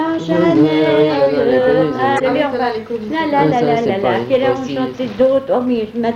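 At 2.16 s a short blip of about 55 ms cuts through the sound, ending at 2.21 s. This is damaged data in a compressed stream. The decoder hit corrupted frames, lost sync and scrambled its output until it found the next valid frame.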